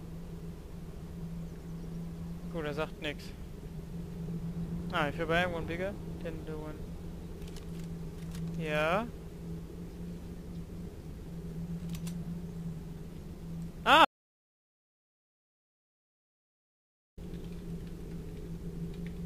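An audio dropout to silence runs from 14.05 to 17.18 s: the input was likely lost while recording continued, leaving about 3.1 seconds of silence, with no room tone left.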